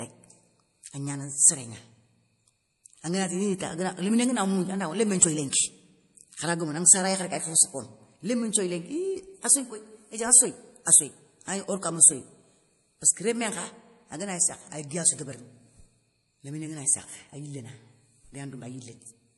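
Throughout the speech, nothing sounds above 11.5 kHz. The sound is watery and swirly, with plain damage. This likely comes from MP3 compression at a low bitrate, fitting about 48 kbps.

Pre-echo occurs from 5.50 to 5.53 s, right after "mougnou anawa lémé nthioyi". Codec noise spreads about 26 ms ahead of an attack, so a short hiss precedes it.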